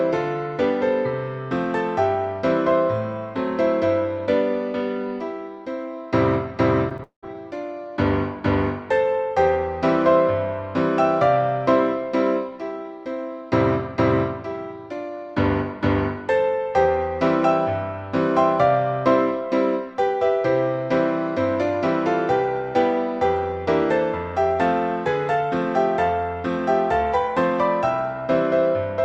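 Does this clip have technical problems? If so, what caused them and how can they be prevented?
Yes. Repeated packet loss (robotic sound) from 6.89 to 7.35 s: four gaps, the longest 191 ms, were patched by stretching the preceding sound, giving a choppy stutter. A steadier network connection or a larger jitter buffer would prevent this.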